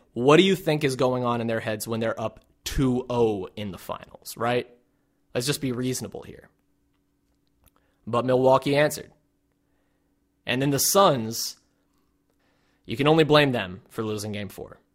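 From 1.95 s, after "on in their heads", periodic clock jitter at around 300 Hz adds sidebands, giving sibilants a metallic roughness that vanishes in pauses, unlike steady noise.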